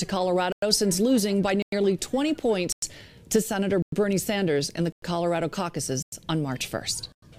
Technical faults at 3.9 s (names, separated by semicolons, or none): gap between chunks